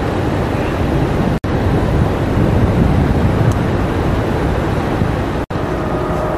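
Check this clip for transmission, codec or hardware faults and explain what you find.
There are two gaps at joins of encoded pieces. The first runs from 1.38 to 1.44 s and lasts about 63 ms. The second runs from 5.44 to 5.51 s, also about 63 ms. They recur every 4.0 s. The audio was encoded in separate pieces and joined without trimming. Each piece kept its encoder's start-up delay and padded final frame. The continuous sound drops to silence with smeared edges. It then resumes where it stopped.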